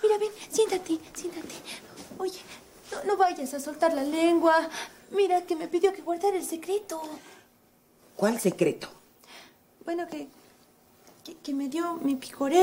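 Nothing technical stands out in this one; the audio runs along without any fault worth pointing to.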